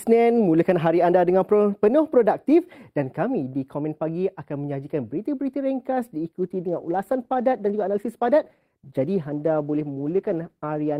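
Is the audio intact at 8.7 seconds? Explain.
No. From 6.33 s to the end, an adaptive stream at a lower bitrate takes over as the connection slows: quality abruptly drops and codec artefacts rise, gaplessly.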